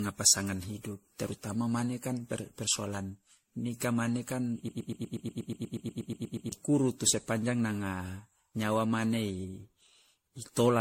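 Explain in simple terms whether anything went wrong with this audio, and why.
Generation loss runs through the whole recording, from start to finish. The speech sounds swirly, hollow and smeared, and the starts of sounds are blurred rather than crisp. The top end is also missing, with nothing above about 16.5 kHz. This is likely because the audio was saved in a compressed MP3 format and then reopened and saved again, around fifteen times over. Each save throws away a little more detail in slightly different places, and those losses pile up.

A broken-record loop runs from 4.69 s to 6.52 s. For almost two seconds, one tiny fragment of sound, only about 0.12 s long, repeats back to back about fifteen times, creating a stuttering, machine-gun effect. The likely cause is that the player or stream briefly stalled and kept resending the last scrap it had instead of moving on. Whatever should have been heard during those seconds is lost.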